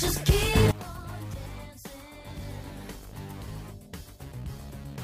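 A sudden drop in level of about 19 dB at 0.71 s persists to the end of the audio. Everything in the sound falls away together, background included, leaving a much quieter residue. The likely cause is one channel inverted: if one side of a stereo source has reversed polarity, the material common to both sides cancels when the two are summed to mono, and only the difference between the channels remains audible.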